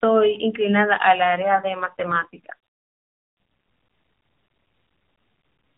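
From 1.34 to 2.56 s an AMR rate drop makes the speech rougher and buzzier, which fits the AMR-NB codec switching from 12.2 to 4.75 kbps.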